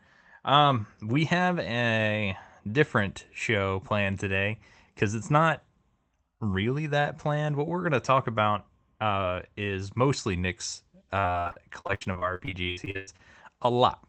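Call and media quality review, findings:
Repeated packet loss (robotic sound), 11.19–13.21 s: choppy speech with 20 dropouts, longest 104 ms, roughly a third of the span concealed. Jitter buffer/PLC stretching the last frame. Spectrogram shows smeared, repeated harmonic slices and missing chunks below the 8 kHz codec ceiling.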